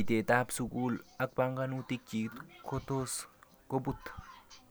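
Speech recording with no audible technical faults anywhere.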